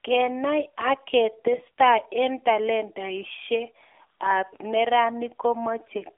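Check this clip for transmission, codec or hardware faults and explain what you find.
One fault runs through the whole clip. AMR narrowband mobile codec, throughout: the speech passes through a vocal-tract model coded in 20 ms frames at a low bitrate, consistent with about 7.4 kbps. The band is 300 Hz to 3.6 kHz, with nothing above 3.7 kHz, and the voice sounds plainly buzzy and synthetic.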